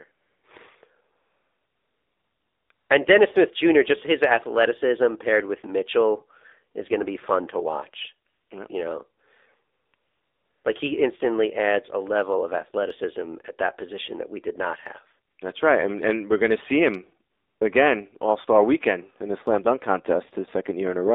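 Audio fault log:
Throughout: AMR narrowband mobile codec. Sound is confined to roughly 300 Hz to 3.7 kHz. The buzzy, synthetic speech fits a low AMR-NB mode near 7.4 kbps.
0.12–0.44, 1.16–2.70, 2.72–2.90, 8.28–8.50, 9.74–9.94, 9.96–10.64, 15.34–15.38 and 17.32–17.60 s: AMR comfort noise. Speech frames stop, and smooth synthetic noise switches in to fill each pause.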